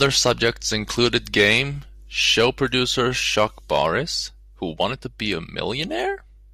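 No technical fault can be heard anywhere in the speech recording, and the signal stays steady and intact throughout.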